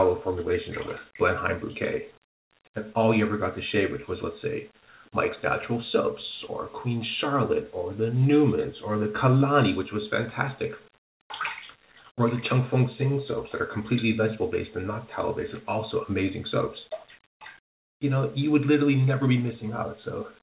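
Nothing here sounds wrong: the audio comes across the way a normal call does, with everything above 4 kHz gone, which fits a G.711-style phone codec running at 64 kbps.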